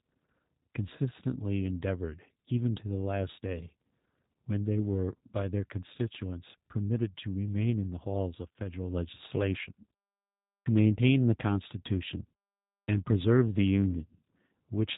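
Throughout, the G.729 codec at 8 kbit/s rebuilds the speech from a filter and pulse model, leaving nothing above 3.8 kHz and a plainly rough, synthetic edge rather than simple muffling. At 10.62 s, after a 0.77 s pause, and again at 12.84 s, after 0.59 s, a clipped start after a pause swallows about 38 ms and 41 ms: the output device was still waking, so the speech begins abruptly without its first sounds. This differs from muted pauses, where the background fades during silence and returns in time for the speech.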